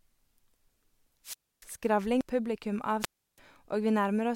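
At 1.24 s the speech suffers a wireless microphone squelch dropout lasting until 1.66 s. The radio link from the analogue FM transmitter weakens, hiss and static swell briefly, and then the receiver's squelch cuts the output for about 288 ms, leaving a hole of near silence before the voice returns. What marks it out is this sequence of noise rising, then a gated mute, then recovery.

At 2.21 s there is damaged data in a compressed stream. Corrupted bytes make the decoder misread the frame and lose sync while it hunts for the next valid header, producing a short synthetic chirp or blip. Unlike the dropout, there is no build-up of hiss.

A second squelch dropout runs from 2.99 to 3.39 s. The signal again fades into static before the receiver mutes for about 328 ms, slightly longer than the first gap, and then the speech comes back.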